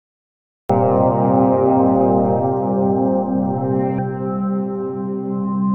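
From 0 to 0.70 s there is only digital silence, and then the sound begins abruptly at 0.70 s mid-event. This is a cut-off start: capture began late, so the onset is missing and the audio appears at full level with no natural attack or fade.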